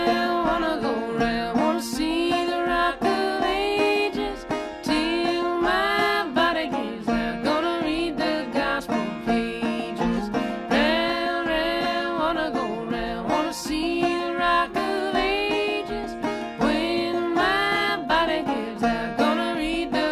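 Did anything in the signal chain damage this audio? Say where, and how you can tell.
No, nothing in the signal chain leaves an audible mark on this audio. No stage, from the wiring to playback, shows any sign of damage.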